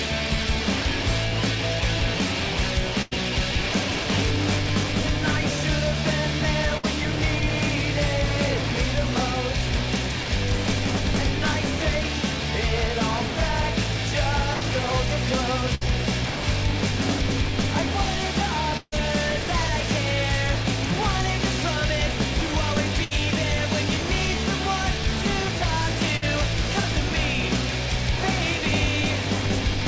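Bursts of packet loss occur at 3.02, 6.77, 14.53, 15.75, 18.77, 23.04 and 26.17 s. Each time, the receiver stretched the last sound into a fading held tone or hiss, then resumed past roughly 60 to 140 ms of lost audio. The 18.77 s burst is longest and decays into brief silence. The call path's bandwidth stops at 8 kHz, which fits G.722 at 64 kbps.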